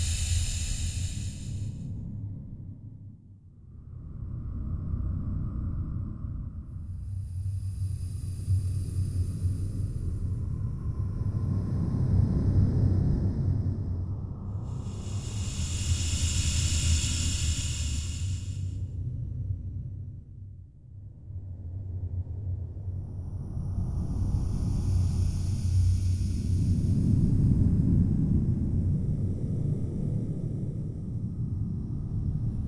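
No technical faults can be heard anywhere in the recording; the signal holds steady throughout without any defects.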